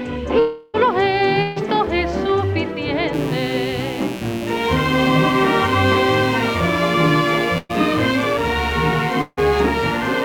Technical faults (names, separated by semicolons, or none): long network dropout; burst of packet loss; mains buzz